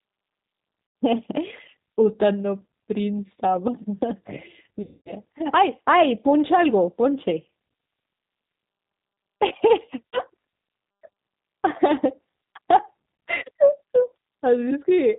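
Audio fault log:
throughout: G.729 codec. The speech is clearly rough and slightly synthetic, with a thin, band-limited tone and nothing above 4 kHz. This matches an 8 kbit/s G.729 coder. It does not send the waveform. It rebuilds each 10 ms frame from a vocal tract filter, a pitch predictor and a few sparse pulses, so the fine detail between those pulses is lost, and that loss is what makes it sound buzzy and artificial.
0.87 s, 4.82 s, 10.12 s, 13.36 s: VoIP packet loss concealed by the speech codec. At these points the speech turns into a stretched, buzzy tone or coloured noise that fades. The gaps are 90 ms, 240 ms, 30 ms and 60 ms, and the one at 4.82 s is the longest. The decoder filled each gap by repeating its last pitch and filter settings at a lower level every frame. Because each frame builds on the one before, the speech stays weak for a short while after it returns.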